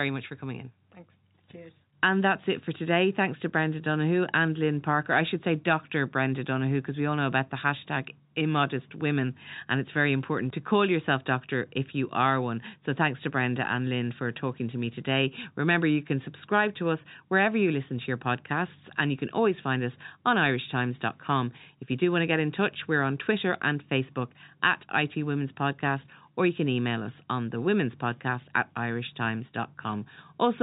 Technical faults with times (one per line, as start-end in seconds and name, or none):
none